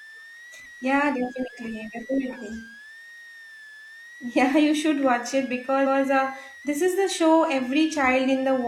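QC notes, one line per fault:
throughout: switching supply whistle. A thin high whistle sits under the speech, wandering between about 1.56 and 2.09 kHz and centred near 2 kHz, some 20 dB below the speech. A switching power supply is running in an audible burst mode or beating with another one, its pitch moving as the load shifts.
5.82–6.00 s: repeated frames. Just after "you should watch it", a 170.7 ms stretch plays twice before "uh this is the", giving a stutter. The same compressed block, which fits a run of four frames, was written twice, adding 0.17 s.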